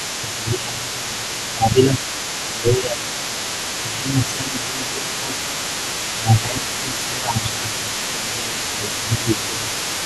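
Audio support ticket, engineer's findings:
Other side's voice leaking through, 0.0 to 10.05 s: far-end talker audible throughout, about 15 dB under local speech; likely incomplete echo cancellation of loudspeaker pickup.

Speech suppressed in double talk at 0.21–2.0, 2.47–3.0, 3.82–5.37, 6.16–6.63 and 6.8–9.72 s: local voice ducked around 10 dB, deepest near 15 dB in 2.47–3.0 s; likely echo canceller attenuating both talkers.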